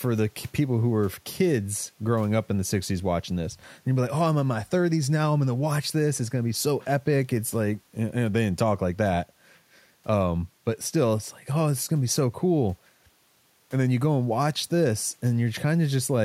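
Speech recording with nothing technically wrong to point to.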